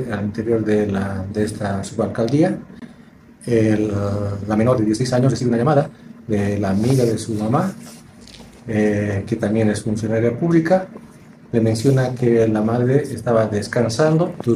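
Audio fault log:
4.41 to 6.41 s, time-stretched section: the pace abruptly jumps to 1.63 times normal speed while the pitch stays put, so for those two seconds the sound turns rushed, then drops back to its normal rate. The likely cause is software squeezing that stretch to fit a shorter length by discarding short slices and joining the remaining pieces end to end. This preserves pitch but gives a hurried pace.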